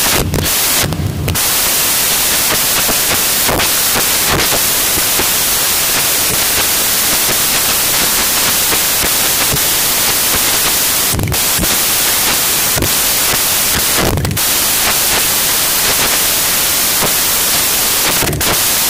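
From start to finish the speech is buried under samples built from the wrong bytes. The reader is assembling each sample from misordered or misaligned bytes, so the rapidly changing low-order bits end up as the most significant part of every value. The result is loud, harsh broadband noise, close to white on the louder passages.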